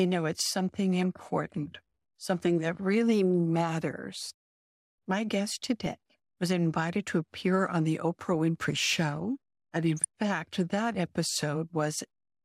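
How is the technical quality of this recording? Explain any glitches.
The recording is marred by two short bursts of DAB burbling in this speech clip. The first runs from 5.62 to 5.86 s, just before "was invited to appear". The second is briefer, from 9.97 to 10.05 s, just before "fact that". Weak reception let a small fraction of a percent of bits slip past error correction into the MP2 data. Corrupted samples then put short blips of noise in single sub-bands, and corrupted scale factors make sub-bands leap in level for up to a frame, which fits roughly ten and seven frames respectively. The result is a burst of blips and level jumps over the sound. Unlike steady low-bitrate codec swirl, it comes in sudden isolated bursts and then clears completely.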